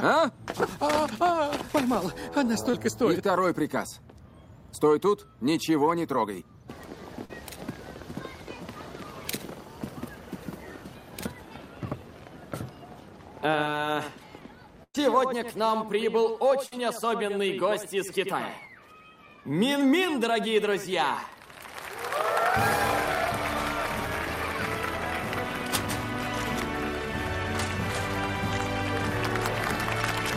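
At 2.70 s and 7.25 s, short concealed packet loss: about 30 and 40 ms went missing and were patched by extending the preceding sound, heard as a brief smear, not a gap.

At 14.83 to 14.95 s and 16.66 to 16.73 s, bursts of packet loss run longer (about 110 and 50 ms). The continued sound fades, reaching about 40 ms of silence in the first, then resumes further on.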